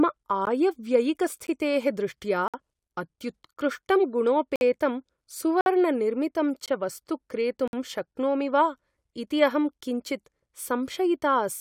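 Gaps between stream segments cut the speech at 0.45, 1.47, 2.48, 3.54, 4.56, 5.61, 6.66 and 7.68 s, roughly once per second. Segment timestamps fail to meet, so silent holes of 13 to 58 ms open, hard-edged flat breaks in the waveform and blank vertical stripes on a spectrogram.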